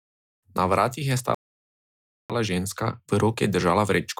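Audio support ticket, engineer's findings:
Playback stall, 1.35 to 2.30 s. Speech cuts out mid-flow into silence for about 0.95 s, then resumes. Likely cause: the player's buffer ran dry or its audio thread blocked, starving the output until data returned.

Time-compressed catch-up, 2.30 s to the end. Speech runs hurried, about 1.1x, at unchanged pitch. The player is trimming its backlog by removing small segments and cross-fading the joins.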